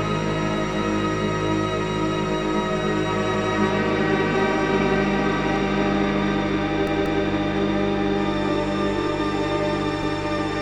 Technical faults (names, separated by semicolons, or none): repeated buffer